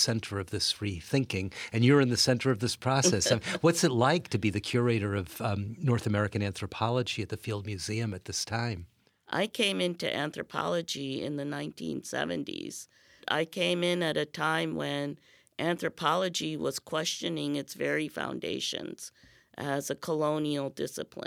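Nothing in the speech stood out as a technical fault on listening.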